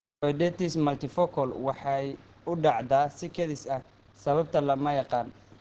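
Throughout, the speech sounds muffled and hoarse with nothing above 8.7 kHz, likely Opus compression in speech mode near 16 kbps.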